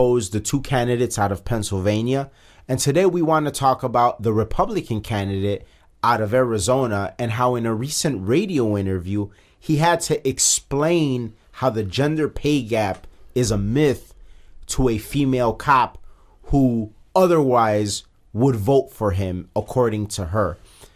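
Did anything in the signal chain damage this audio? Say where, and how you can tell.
No, nothing in the signal chain has damaged this recording of speech. No stage leaves a mark on the sound that can be heard or placed in time.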